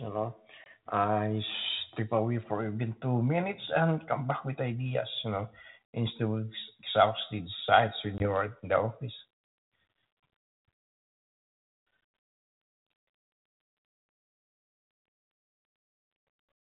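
Packet loss on an ADPCM call strikes at 0.64 to 0.66 s and again at 8.18 to 8.27 s, each time dropping about 20 ms of audio, roughly a couple of packets, and filling the gap with silence. The speech cuts out with hard edges. When it resumes, the decoder's adaptive predictor and step size no longer match the sender's, so the speech comes back with brief, slight distortion before settling. The underlying codec sounds consistent with 32 kbit/s G.726.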